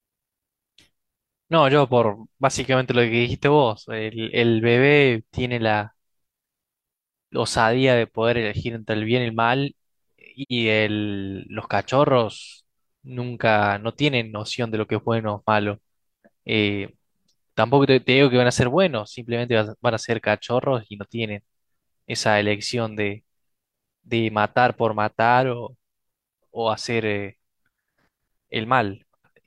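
At 10.42 to 10.52 s, AAC frame loss with muting leaves a soft-edged hole of about 85 ms, consistent with two zeroed frames; overlapping windows fade it.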